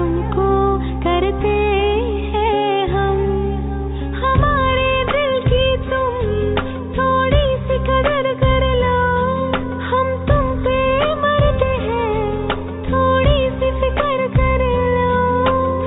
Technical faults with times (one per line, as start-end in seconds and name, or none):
none